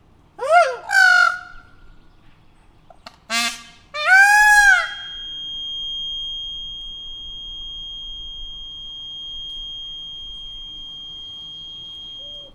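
From 4.48 s to the end, a feedback whistle sits around 3.2 kHz, roughly 15 dB below the sound. It swells and fades slowly in level. A speaker-to-microphone loop is likely at the edge of feedback.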